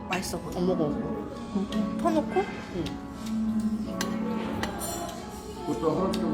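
No technical faults can be heard anywhere in this recording of sounds. There is no moment in the audio that needs a timestamp or further comment.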